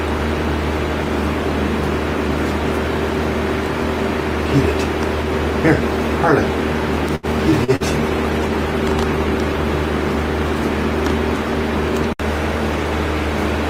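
From 7.15 to 7.83 s, repeated packet loss leaves several short holes, the longest about 77 ms, patched by extending prior sound, giving choppy, robotic texture. Then, from 7.86 to 9.78 s, a call bitrate drop, consistent with roughly 64 falling to 18 kbps, makes coarser coding with dulled highs, sounding watery and muffled.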